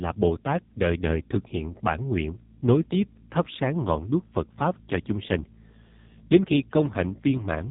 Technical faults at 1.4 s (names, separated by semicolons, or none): AMR narrowband mobile codec